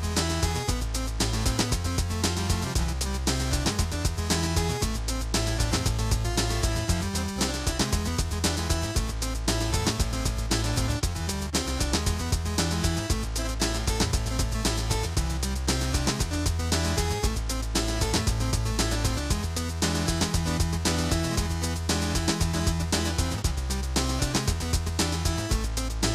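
A recording of sounds with periodic USB or driver dropouts between 19.56 s and 25.55 s. A small click lands every 2.0 s, about four in all, each where a tiny sliver of audio, well under a millisecond, is skipped outright, leaving a splice in the waveform rather than a gap of silence. The fixed spacing points to a background task stalling the USB bus or audio driver at a regular interval.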